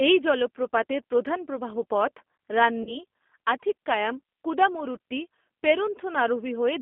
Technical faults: G.729 codec; VoIP packet loss concealed by the speech codec

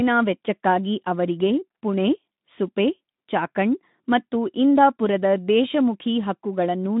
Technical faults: none

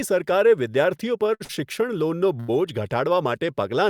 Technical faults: short stall from a late packet

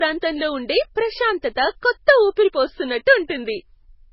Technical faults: low-bitrate audio saved at a high bitrate

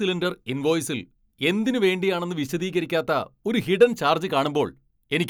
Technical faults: none

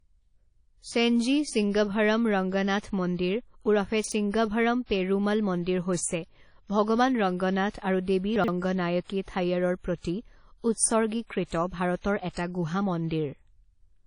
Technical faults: WMA compression; chunks out of order

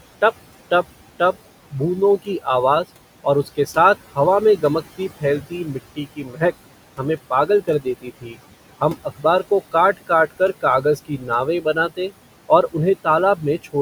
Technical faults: noise suppressor artifacts; speech cut by the noise suppressor

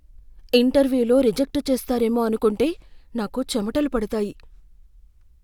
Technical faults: clock drift buffer slips

